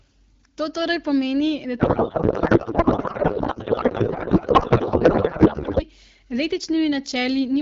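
After "torej pomeni da", from 1.79 to 5.85 s, a codec payload misread turns the AMR-WB speech into garbled warbling noise, consistent with octet-aligned frames being parsed as bandwidth-efficient.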